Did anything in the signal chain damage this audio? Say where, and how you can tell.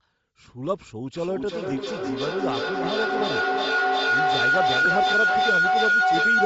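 Yes. Throughout the clip the speech has a breathy, grainy edge. The upper band sounds hollowed out and refilled with noise. That points to the codec stage, likely Bluetooth LC3 compression at a low bitrate, with fine spectral detail discarded and replaced.

A feedback howl begins at 1.13 s and runs to the end. It settles near 1.5 kHz and peaks about 7 dB above the speech. The loop repeats roughly every 300 ms. Two devices on the same call formed an acoustic loop with gain above unity.

At 4.85 s there is a brief noisy smear in the sound, lasting about 7.5 ms. This is lost LE Audio frames on the wireless link, which fits one dropped frame. The decoder concealed the gap by reusing the previous spectrum with scrambled phase.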